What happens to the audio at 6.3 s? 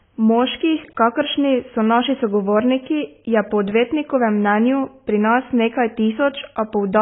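At 6.3 s the speech carries AAC compression damage that runs through the whole clip. The sound is likely AAC-LC at a very low bitrate, around 16 kbps, which cuts everything above 3.7 kHz and starves the remaining bands, leaving dull, smeared speech with a warbling, fizzy edge.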